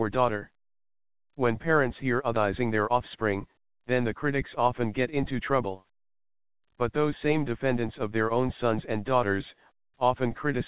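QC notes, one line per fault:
2.36–2.38 s, skip ahead: the sound jumps abruptly forward with no gap, losing roughly 0.7 s of audio that was dropped while later audio already sat waiting.
2.60–3.77 s, jitter buffer speed-up: the sound runs about 6% fast at unchanged pitch, because the receiver trimmed short pitch-period pieces, around 70 ms in total, to shrink an overfull buffer.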